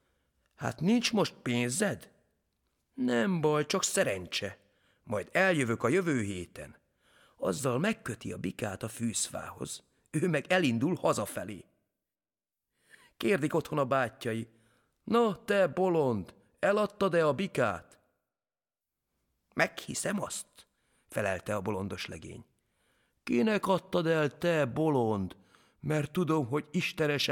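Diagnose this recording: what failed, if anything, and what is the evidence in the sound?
Nothing in the speech signal points to a failure at any stage of the chain, from capture and conversion through transmission, storage and playback.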